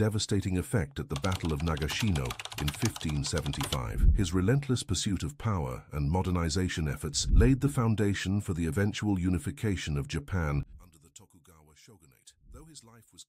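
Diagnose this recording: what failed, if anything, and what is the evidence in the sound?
Analogue wiring is the likely stage: one channel inverted, its polarity reversed against the other. From 10.63 s to the end, the mono sum falls by about 27 dB as the shared centre content cancels, leaving only a faint residue of the channel difference.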